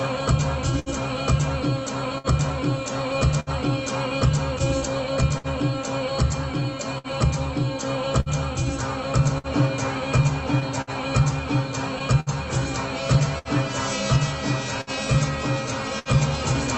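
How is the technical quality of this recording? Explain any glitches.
The recording has two clear problems: a steady timing wobble that runs through the whole thing, and a scatter of tiny dropouts patched over along the way. It came through an Opus call path, and the top end stops around 8 kHz, which fits a call codec at roughly 32 kbps.

Clock drift between sender and receiver is there from start to finish. The sending side's clock seems to run about 5% slow, so the receiver's jitter buffer keeps draining. To cope, it keeps stretching or repeating short slices of audio. You hear that as small, unevenly spaced hitches and a slightly lurching flow.

Scattered short gaps show up from about 0.79 s to 16.09 s, roughly twenty of them. They add up to something like 0.7 s in total, and the longest is around 70 ms. Each one looks like a late or lost packet that the receiver covered by carrying on the last bit of sound. 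So instead of silence you get quick ticks, little smears or stutters, and the audio stays clear between them.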